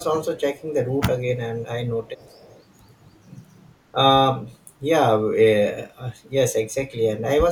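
At 0.58 to 0.62 s a faint delayed copy of the speech surfaces, roughly 30 dB below the main voice and 362 ms behind it. This is an echo leak, likely from a far-end loudspeaker whose echo canceller let some pickup through. Unlike room reverberation, it is a distinct repeat at a fixed lag, not a smeared tail.

From 1.0 to 1.18 s the voice dips in short pieces, around 10 dB at most and only about 40 ms in total. This is speech suppressed in double talk: with both sides active, the canceller likely turned the talker down along with the echo. The sound dips rather than falling fully silent as in a dropout.

The echo leak returns from 2.05 to 2.59 s, longer this time but with the same faint level and the same 362 ms delay, which points to one echo path.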